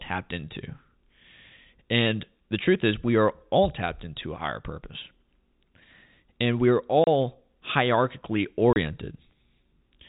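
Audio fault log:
7.04 s and 8.73 s, packet loss filled with silence: the speech drops out for 30 ms each time, with hard edges because the waveform is cut to silence and then resumes mid-cycle. Each hole's length fits three lost 10 ms packets. Unlike concealed loss, nothing is smeared or repeated across the gap; it is plain silence. The band-limited G.711 telephone sound is heard on either side of both holes.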